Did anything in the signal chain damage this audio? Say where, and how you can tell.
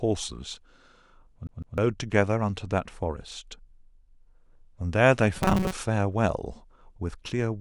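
Yes. A CD stuck on one turn, at the disc playback stage: from 1.47 to 1.78 s a 154 ms slice plays twice, with a mute at each jump.

The driver buffer likely ran dry, giving robotic sound from repeated short buffers: from 5.37 to 5.74 s, a rigid 188 Hz buzz replaces roughly half the sound.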